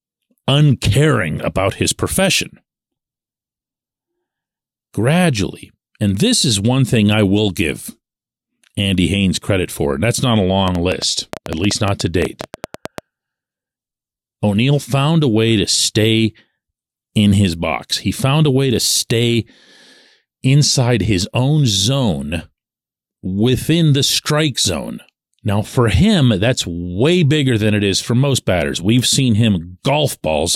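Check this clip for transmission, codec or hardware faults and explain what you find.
One hardware-type fault stands out in this speech clip: a train of clicks from 10.68 to 12.99 s. About twenty similar pulses arrive unevenly, averaging 8.7 per second and peaking roughly 10 dB above the speech. The likely source is nearby electrical interference or a struggling interface injecting repeated spikes. They tick through pauses as well as speech, and their matching shape marks them apart from random crackle.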